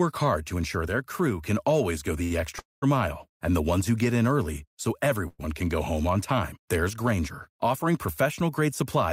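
A short stall from a late packet at 2.23 to 2.32 s: a packet missed its playout time and the jitter buffer emptied, so the receiver stretched the last sound for about 70 ms, a held sound with a faint buzz or dip, then resumed exactly where it stopped, losing nothing but adding 70 ms of delay.

A call audio freeze follows at 2.59 to 2.84 s, likely from packets held up in transit draining the jitter buffer. The last sound is continued as a fading buzz or hiss that drops into about 180 ms of silence, 230 ms inserted in all. A second freeze at 5.28 to 5.41 s fills 104 ms with fading continuation and no silence. Both resume without missing audio.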